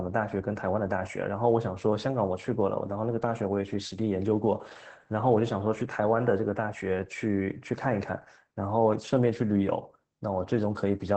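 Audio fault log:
Throughout: Opus voice compression, plainly audible across the whole speech clip. The SILK linear-prediction coder in wideband mode caps the band near 8 kHz, so sibilants and breath lose their air and the sound turns muffled. At a bitrate that sounds like about 12 kbps, the excitation is coded coarsely in 20 ms frames, giving a hoarse, slightly robotic buzz. Low-pass filtering alone would only dull the sound. This coder also reshapes the texture of the voice.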